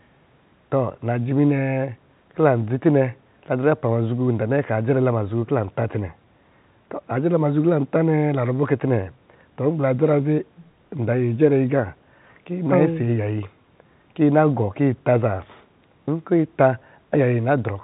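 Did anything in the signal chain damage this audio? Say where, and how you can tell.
No, nothing in the chain has done any damage here; the speech went over a call path using G.711 mu-law at 64 kbps, so there's nothing above 4 kHz, which is simply the normal narrowband ceiling of that codec.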